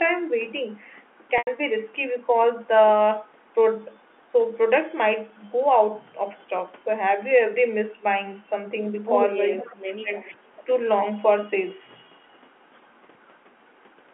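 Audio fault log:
1.38 to 1.47 s, packet loss with pitch repetition: about 90 ms of audio went missing, which fits three lost packets. The receiver repeated the last pitch period and faded it out, so the speech briefly holds on a slightly buzzy, sustained tone before resuming.
9.58 to 9.65 s and 10.22 to 10.34 s, echo leak: some of the far-end sound likely got past an echo canceller on a loudspeaker side and was sent back. It comes through as a faint delayed copy, lagging about 445 ms, roughly 20 dB and then 30 dB below the speech.
9.59 to 10.1 s, speech suppressed in double talk: with both sides talking at once, the echo canceller likely could not tell the local talker from the loudspeaker echo and turned the signal down. For about half a second the speech dips, by as much as roughly 25 dB at its deepest.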